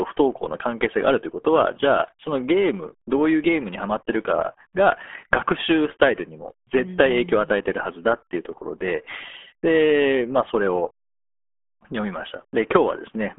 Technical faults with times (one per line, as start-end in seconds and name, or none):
0.00-13.38 RealAudio 14.4 codec